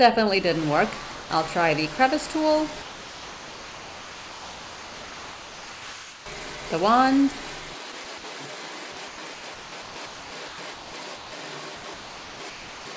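The sound gives way to steady, even noise twice, from 1.12 to 1.30 s and from 2.82 to 6.26 s. The second gap lasts about 3.4 s. Each time the real audio stops abruptly and a flat hiss fills in until it resumes. This is sound dropped by the voice detector. The sender most likely judged the audio to be background, stopped transmitting, and the receiver generated comfort noise in its place. Later the audio turns choppy in three stretches, from 7.92 to 8.24 s, 8.92 to 11.32 s and 11.76 to 12.86 s. Short pieces of sound drop out repeatedly. Over these stretches about 1.3 s and 0.9 s of sound are replaced in the last two. This is sound chopped by the voice detector, likely from the sender switching transmission on and off several times. Throughout, nothing is heard above 8 kHz, which fits a G.722 call path.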